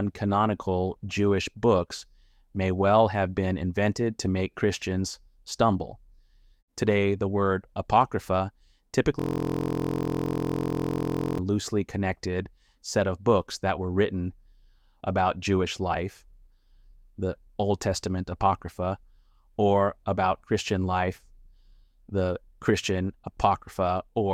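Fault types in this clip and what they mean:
System hang loop: Something in the computer or audio driver stalled, and the sound hardware kept replaying whatever was left in its ring buffer. From 9.19 s to 11.38 s, one 23.22 ms slice of audio repeats 94 times. That loop length fits a 1024-sample buffer. Because the slice is so short, it doesn't stutter. It fuses into a steady, flat buzz at about 43.1 Hz, lasting a bit over two seconds.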